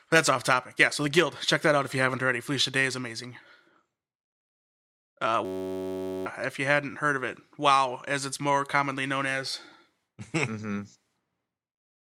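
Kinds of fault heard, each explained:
System hang loop: from 5.45 to 6.26 s the speech gives way to a steady buzz at about 94 Hz. A single 10.67 ms slice of audio repeats exactly, which fits a 512-sample buffer being replayed over and over while the system froze. Unlike a dropout, the gap is filled with sound rather than silence. Unlike a long-buffer stutter, the repeats come too fast to hear separately. Most of a second of speech is lost.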